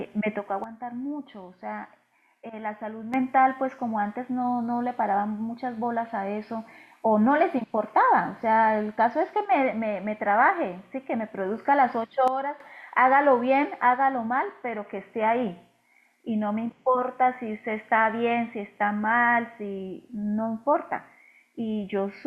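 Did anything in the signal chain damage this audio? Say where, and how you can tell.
Yes. There is a sudden gain jump at two points: the speech and its background noise drop together by about 10 dB from 0.64 to 3.14 s, and again from 12.28 to 12.60 s, each time snapping back just as abruptly. The likely cause is a digital gain change in the processing stage applied without a ramp. A waveform would show the envelope stepping down within a single sample. A spectrogram would show every band, noise floor included, darkening uniformly.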